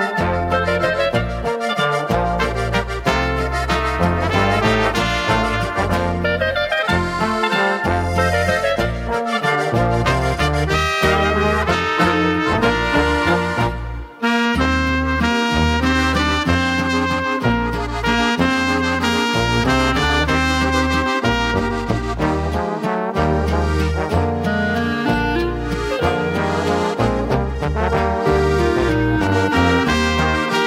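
No technical faults can be heard anywhere in this audio.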